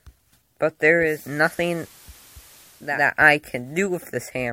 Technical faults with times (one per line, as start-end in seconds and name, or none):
0.96-3.10 digital radio blending to analogue